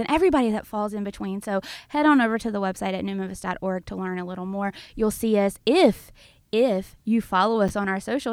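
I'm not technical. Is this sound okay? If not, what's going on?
No, there's a tiny glitch at 7.68 s, right after "us if if you". A 10 ms slice of audio, called chunks out of order, plays one slot late, causing a quick jumbled moment.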